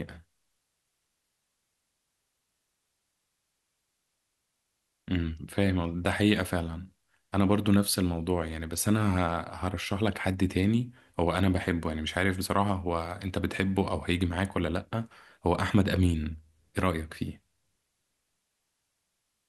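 Listening through the recording, nothing stood out as a technical problem at any point.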